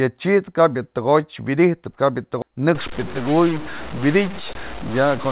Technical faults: skip ahead; stuck bit

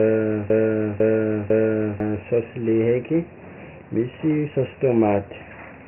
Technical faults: Dialogic VOX ADPCM; broken-record loop

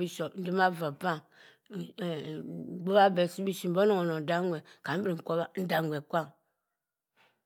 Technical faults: none

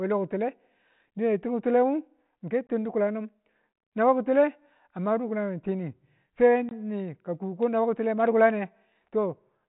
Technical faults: gap between chunks

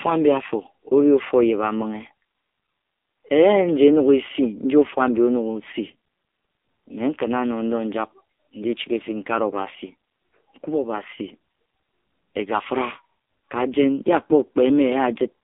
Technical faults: AMR narrowband mobile codec

